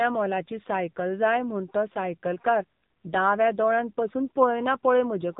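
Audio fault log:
Throughout: AMR narrowband mobile codec. Nothing above about 3.8 kHz survives, so the speech sounds boxed in and telephone-like. The codec models the vocal tract and drives it with only a few pulses per short block. At this low rate that model is coarse. The damage is heavy, with a buzzy, synthetic edge on the voice. That fits one of the lower AMR-NB modes, around 6.7 kbps.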